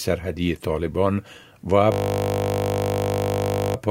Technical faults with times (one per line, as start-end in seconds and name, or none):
1.92-3.76 system hang loop